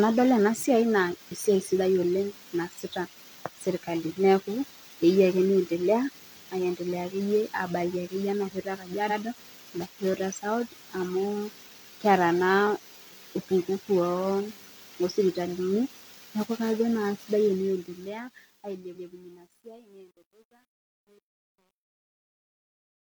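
At 9.06 to 9.15 s, a block of compressed frames was sent twice, so the decoder replays the same 92.9 ms, about two frames' worth, and a repeated frames stutter adds 92.9 ms to the speech.

From 17.35 s to the end, the fade-out stage keeps too few bits and adds no dither, which fits a 10-bit path. As the smooth fade begins at 17.35 s and sinks toward silence, this truncation distortion on a fade turns the level into coarse steps, and from 18.71 s the tail is gritty.

At 18.90 to 19.04 s, inside that fade, another run of repeated frames replays 139.3 ms once, lengthening the audio by 139.3 ms.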